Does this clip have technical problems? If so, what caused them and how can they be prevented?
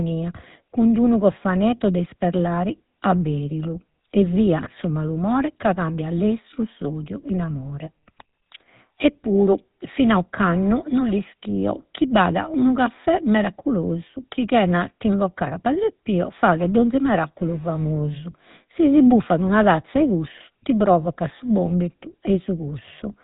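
Yes. The speech has a buzzy, gravelly roughness throughout, and nothing above 3.8 kHz survives. This is GSM full-rate codec damage, consistent with 13 kbps. Prevent it by recording or transmitting through a wideband codec instead.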